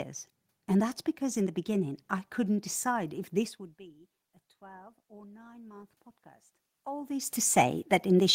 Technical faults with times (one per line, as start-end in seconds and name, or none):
4.59-7.23 automatic gain rising